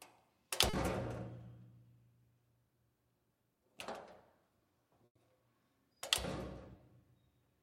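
Short concealed packet loss at 0.69 to 0.75 s and again at 6.77 to 6.81 s: about 40 ms and then 20 ms of audio never arrived in time, and the receiver extended the preceding sound to bridge each hole, leaving a brief smear or wobble.

A burst of packet loss at 5.05 to 5.17 s removes about 100 ms in one go. The receiver carries the last sound forward and fades it out, so roughly 80 ms of that stretch is silence before the audio resumes with the lost part gone.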